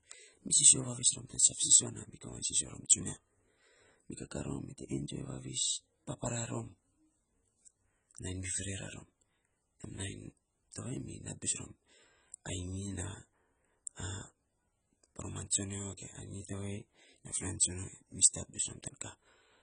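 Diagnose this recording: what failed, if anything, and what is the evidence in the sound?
The failure sits at the codec stage and runs through the whole recording. The speech has nothing above 9.6 kHz, so it sounds dull and smeared, and the damage is heavy: sibilants and sustained vowels turn fizzy and warbling. The likely cause is AAC compression, AAC-LC, at a bitrate low enough to fit about 16 kbps, where the encoder drops the upper band and quantises the remaining spectrum so coarsely that it leaves gaps and noisy fill.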